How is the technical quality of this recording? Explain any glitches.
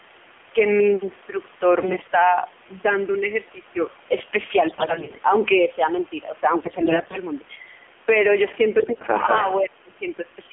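Technical quality is poor. The speech has narrowband mobile-codec colouring throughout, four bursts of corruption, and a short echo with a dip in level near the end.

The AMR narrowband mobile codec, running at 7.4 kbps, is audible across the whole recording. The codec rebuilds the voice from a vocal-tract model driven by a few pulses, so it sounds buzzy and synthetic. The line passes only about 250 Hz to 3.4 kHz. On a spectrogram, everything above 3.4 kHz is empty.

AMR bit errors appear at 1.82–2.12 s, 4.68–5.21 s, 6.62–7.17 s and 8.80–9.06 s. Roughly 10 to 15 percent of the less protected bits were flipped, so the pulses and the fine pitch, gain and spectrum values decode wrongly. The voice keeps its level but turns hoarse and gargly. A spectrogram shows smeared, noisy harmonics in these spans.

An echo leak, likely from a loudspeaker on one side whose echo canceller missed part of the signal, runs from 9.21 to 9.5 s. 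A copy of the voice returns about 195 ms late and about 5 dB below it. The waveform shows a delayed, weaker repeat of the preceding envelope.

Speech suppressed in double talk follows at 9.61–9.91 s. This is likely an echo canceller unable to separate the talker from the other side and turning both down. Over about 300 ms the voice dips by up to about 15 dB. The waveform visibly shrinks there, and the spectrogram fades.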